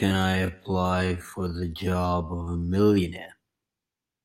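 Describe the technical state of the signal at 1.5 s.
At 1.5 s you're right in the middle of a time-stretched section that runs from the very start to about 2.96 s. The speech is dragged out to roughly 0.58 times normal speed, yet the pitch hasn't dropped, so it's likely been stretched by software that fills the extra time by repeating short slices of the waveform. That's why it drags, and why the pace jumps when the section ends.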